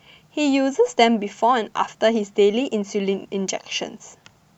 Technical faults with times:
none

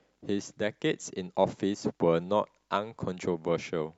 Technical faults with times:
none

